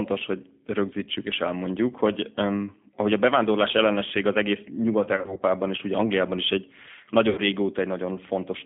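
G.729 codec damage runs throughout: the speech is squeezed into a band of about 150 Hz to 3.5 kHz, which fits an 8 kbit/s codec, and is rebuilt from a pitch predictor and a few pulses per frame, leaving it plainly rough and synthetic.

VoIP packet loss concealed by the speech codec hits from 5.16 to 5.42 s, with 120 ms missing in short gaps of up to 40 ms spread over 240 ms, and again from 7.29 to 7.40 s, with 80 ms missing. Each time, the decoder stretches its last pitch and filter into a fading buzzy tone or coloured noise, and the speech stays weak briefly afterwards.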